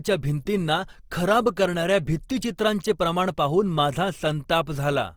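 Throughout, the speech shows Opus compression, likely CELT mode near 24 kbps: tones sound grainy and rough, with noise-filled spectrogram bands reaching 20.4 kHz.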